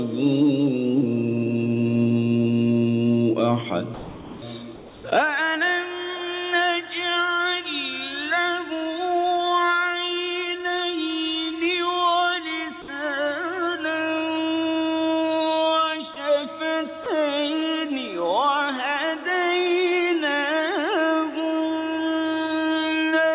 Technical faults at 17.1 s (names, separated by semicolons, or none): sound dropped by the voice detector